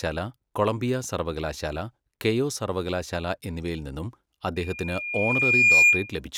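At 4.56 s a loudspeaker feedback squeal begins and lasts until 6.14 s. The microphone is hearing the loudspeaker it feeds, and around 2.4 kHz the loop gain climbs past unity, so that tone reinforces itself. It swells over roughly a second into a piercing whistle that ends up about ten decibels above the speech. A spectrogram shows a single bright horizontal line at 2.4 kHz thickening as it grows, and the waveform envelope rises steadily.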